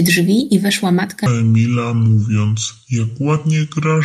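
Speech clip with a section at the wrong speed: from 1.26 s to the end it plays at 0.645 times speed, dropping pitch roughly seven semitones, likely from a clock or sample-rate mismatch.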